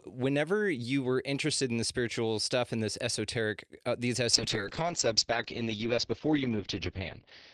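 From 4.35 s to the end, a call bitrate drop starves the encoder, consistent with a fall from 48 to 8 kbps. The top end narrows from 20 kHz to 6 kHz, and speech turns rough and watery for 2.65 s, continuous rather than gapped like packet loss.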